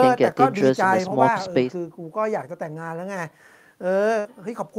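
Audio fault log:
4.19 to 4.27 s, burst of packet loss: a run of consecutive packets failed to arrive in time for playback, leaving a hole in this speech of roughly 54 ms. The receiver's concealment stretches the last received sound across that hole and fades it down as the gap goes on, so the sound briefly smears instead of cutting off. Playback then picks up further along, with about 60 ms of the original speech skipped.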